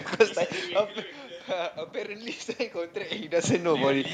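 From 1.5 s to 4.09 s the speech and the room noise behind it swell together, climbing by about 7 dB. This is automatic gain rising: the input had dropped by about 12 dB, so the gain control gradually raised its gain to compensate.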